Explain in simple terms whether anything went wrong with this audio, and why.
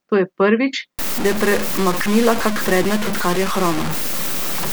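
From 0.99 s, right after "je prvič", the speech turns harsh and grainy to the end, almost as loud as the voice. That's low bit depth without dither, likely from rounding down to about 4 bits.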